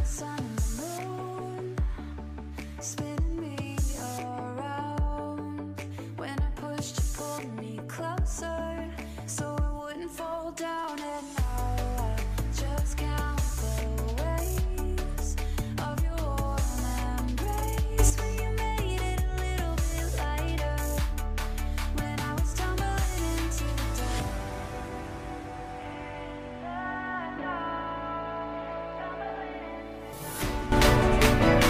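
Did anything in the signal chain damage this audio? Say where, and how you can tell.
Yes. Sudden gain jump at 17.99 to 18.1 s and from 30.72 s onward: sound and noise leap about 11 and 12 dB together, likely an unramped digital gain change.

Damaged data in a compressed stream at 30.12 s: a short blip as the codec decoder misreads corrupted frames, loses sync and skips ahead to the next header.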